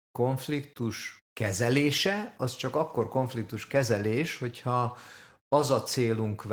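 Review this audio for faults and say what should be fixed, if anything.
Nothing in this audio needs to be fixed, as there are no faults to report.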